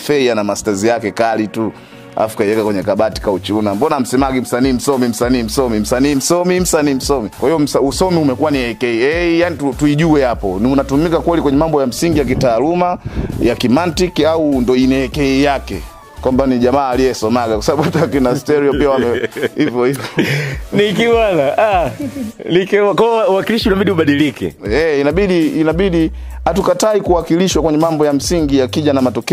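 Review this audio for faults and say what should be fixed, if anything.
Two small jumps in the sound, at 18.47 s and 28.22 s, the second a longer skip. Likely a dropped buffer (overrun): samples weren't read out in time, so a few milliseconds, then about fifteen, got overwritten and the two sides butted together. Bumping the buffer size or easing CPU load during capture should stop it.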